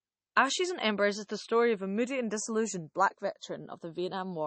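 Right from the start, the two channels are drifting apart. Their clocks disagree by somewhere around 70 ppm, so the gap between them creeps up to a fraction of a millisecond by the end. In mono, that sliding delay gives a slow flanging sweep.

Across the whole clip there's also a smeared, watery, low-bitrate codec character that the file's high bitrate doesn't match. It's likely low-bitrate audio saved at a high bitrate: an MP3 consistent with 32 kbit/s, re-encoded around 192 kbit/s, which keeps the damage without undoing it.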